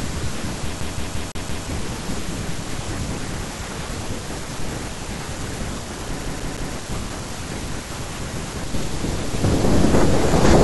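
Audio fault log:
0.81–1.66 s and 6.23–6.74 s, CD stuck on one turn: the laser keeps jumping back, replaying a 0.17 s slice five times, then three, with brief mutes between. On a spectrogram it appears as identical repeating blocks; the waveform shows evenly spaced copies separated by gaps.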